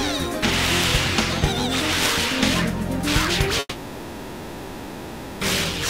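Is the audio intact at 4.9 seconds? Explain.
No, a long network dropout runs from 3.59 to 5.43 s, so 4.9 s falls inside it. The likely cause is a stretch of about 1.8 s where no audio arrived. The receiver stretches the last sound into a fading buzz or hiss, and the lost audio never returns.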